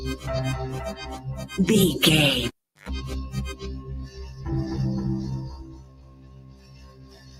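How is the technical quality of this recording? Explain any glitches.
The recording has a clear processing fault: a noise suppressor built for speech is working on sound it was not designed for, and it audibly damages the signal.

Noise suppressor applied to music or sounds: throughout the clip, the suppressor treats sustained content and ambience as noise. Its gain swings by around 20 dB, so attacks pass while held portions sink, giving a pumping, fluttering, thinned texture. The waveform envelope breathes unevenly, and the spectrogram shows blotchy, flickering energy between onsets.

Sound cut by the noise suppressor: from 4.07 to 4.4 s, about a fifth of a second of sound is pulled down by about 9 dB. From 5.59 s to the end, the drop deepens to about 13 dB. Steady or decaying parts are mistaken for noise and attenuated, so tails vanish early. The waveform thins there, and the spectrogram goes visibly paler.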